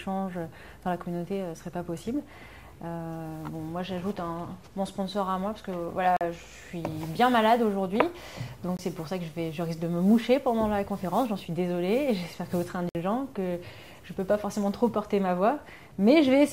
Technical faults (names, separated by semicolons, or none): block of digital silence